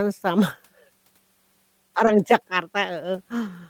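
Speech, with a short concealed packet loss at 2.05 to 2.09 s: 20 ms of audio never arrived, and the decoder extended the preceding sound for about 13 ms before blending back in, giving a brief smear or wobble. On a spectrogram the spectrum there looks stretched and repeated rather than evolving. Lost packets rebuilt from error correction follow at 2.07 to 2.09 s and at 3.03 to 3.05 s, each a 20 ms frame played from the low-bitrate backup copy carried in the next packet. These frames sound rougher and noisier with no gap, appearing as grainier, less clearly defined patches in the spectrogram while the waveform stays continuous.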